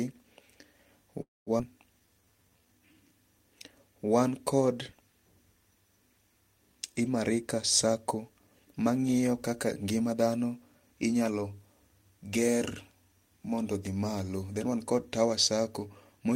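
Call audio freeze, 1.21 to 1.50 s: the speech stops and the last sound carries on briefly as a fading buzz, then drops to silence for about 200 ms, with roughly a quarter of a second of filler in all. The likely cause is packets held up in transit, so the jitter buffer ran dry and the receiver stretched out what it had. When audio resumes it picks up exactly where it left off, so nothing is lost, only delayed.

Skip ahead, 1.59 to 1.62 s: about 90 ms after the freeze, playback jumps forward with only a tiny seam of a few milliseconds. Roughly a fifth of a second of speech is missing, with the two sides butted almost directly together. A stretch of audio was dropped while later audio was already waiting, clawing back most of the delay the freeze had added.

Jitter buffer slow-down, 2.00 to 2.95 s: the speech drags to about 83% of normal speed while the pitch stays put, so sounds are drawn out. 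The receiver was building a reserve by repeating single pitch periods over and over, adding 169 ms across this stretch to give the buffer more cushion.

Jitter buffer speed-up, 7.41 to 10.14 s: the speech runs at about 109% of normal pace at unchanged pitch, sounding noticeably hurried. Here the buffer held more audio than its target, so the receiver trimmed out short pieces one or a few pitch periods long, again and again, removing around 0.3 s in total to bring the delay back down.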